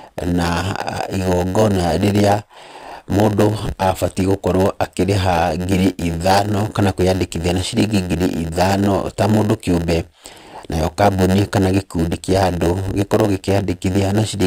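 A steady buzz of about 92 Hz runs under this speech recording from start to finish, and everything plays slightly slow, at about 0.92 times normal speed. This is a padded block size mismatch: one stage writes shorter blocks than the next reads, and the zero-filled remainder of each block leaves a tiny gap at the block rate.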